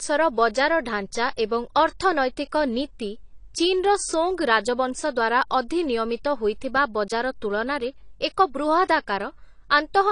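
Throughout the speech, nothing sounds above 10.1 kHz even though the file is a high-bitrate MP3. This points to low-bitrate audio saved at a high bitrate, likely an earlier encode near 32 kbit/s. Its band limit stays fixed because the second encode cannot restore what the first removed.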